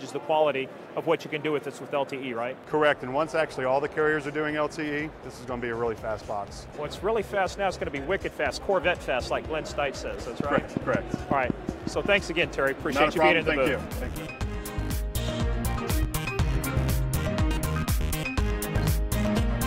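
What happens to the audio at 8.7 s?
Nothing goes wrong at 8.7 s; the audio plays through that moment intact, with no dropout, glitch or distortion.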